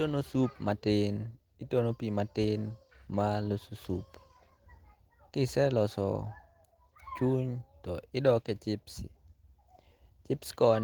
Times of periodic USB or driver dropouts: none

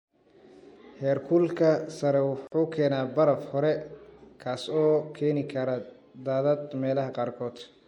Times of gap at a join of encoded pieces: 2.47-2.52

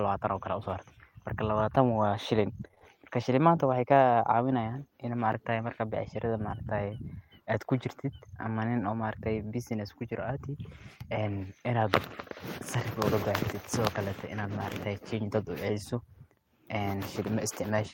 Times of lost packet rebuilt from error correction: 13.25-13.51

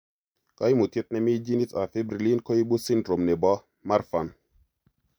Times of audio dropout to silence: none

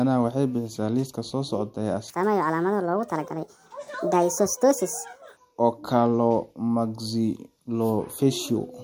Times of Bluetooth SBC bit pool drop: none

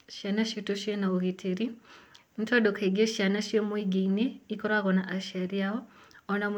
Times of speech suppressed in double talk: none

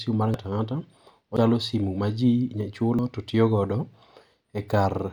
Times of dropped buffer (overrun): 0.34, 1.37, 2.99

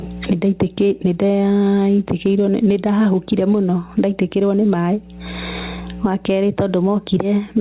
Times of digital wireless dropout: none

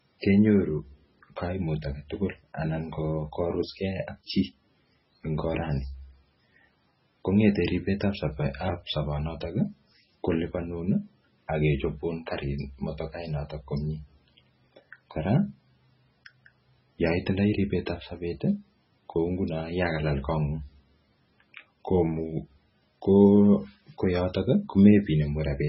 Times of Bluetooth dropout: none

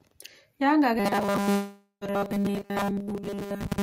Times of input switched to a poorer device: none

